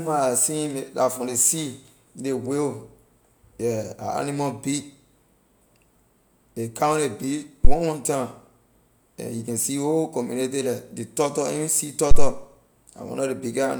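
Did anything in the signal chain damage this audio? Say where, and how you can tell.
Yes, at the analogue input. Two phantom power thumps: 7.65–7.75 s before "one time", and 12.11–12.33 s after "ley turtle any sea". Deep thuds peaking near about -1 dBFS, decaying in 22 and 48 ms. That's a supply switching on a live input, its step punching through the coupling caps.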